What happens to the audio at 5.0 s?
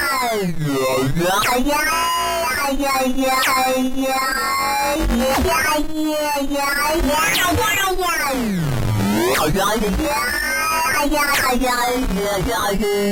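Compressed frames skipped at about 4.95 s: the audio jumps ahead by roughly 70 ms, around four of its 20 ms frames, which never reached playback. The sound continues from a later point with the missing stretch simply gone.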